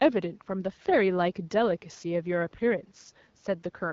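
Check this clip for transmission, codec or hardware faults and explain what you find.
Nothing here points to a transmission, codec or hardware problem: the room noise sits about 43 dB under the speech, and the HD Voice (AMR wideband) link at 12.65 kbit/s carries it as intended with only light coding traces.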